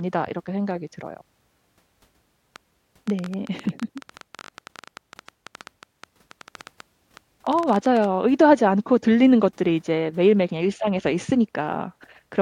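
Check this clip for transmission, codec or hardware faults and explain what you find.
One fault is present, a train of clicks. From 2.56 to 8.05 s, about fifty sharp, similar clicks tick over the speech at around 10.2 per second, unevenly spaced. They peak a few decibels above the speech and continue through pauses. The likely cause is electrical interference or a struggling interface injecting repeated pulses.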